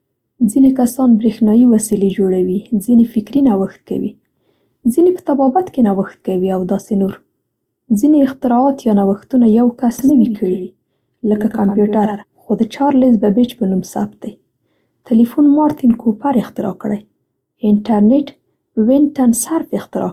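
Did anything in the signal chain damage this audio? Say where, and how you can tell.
Yes. At the codec stage, the whole 20-second speech clip carries two different sets of compression artefacts at once: smeared, swirly high-frequency detail alongside a second layer of coarse, watery texture, with the top end capped at the lowest bandwidth in the chain. This points to transcoding between lossy codecs, likely a Vorbis encode at around 63 kbit/s re-encoded as Opus at around 48 kbit/s. The second encoder spends bits reproducing the first one's damage and then adds its own.

At the capture or edit stage, from 9.99 s to 12.23 s, the speech is accompanied by a full-band copy of itself trailing roughly a tenth of a second behind and about 10 dB quieter. The copy has no reverberant tail or room colouring, and it starts and stops abruptly at those two points. That is a doubled audio track, likely a second, slower capture path or an edit that left two offset copies mixed together for that stretch.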